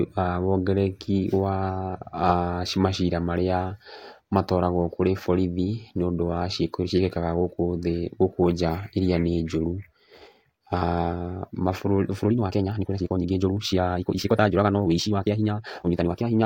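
A time-stretched section runs from 12.20 s to the end: the speech plays at double speed with pitch unchanged, likely from dropped short pieces, sounding rushed.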